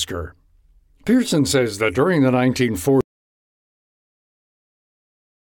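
At 3.01 s the speech cuts off mid-flow and the clip stays in total silence through to the end, about 2.5 s later. This is an audio dropout to silence: the input was likely lost, through a disconnection, failed link or mute, while recording carried on writing silence. No room tone or noise floor survives in the gap. On a waveform the trace collapses abruptly to a flat line, and a spectrogram shows a hard vertical edge followed by darkness across every frequency.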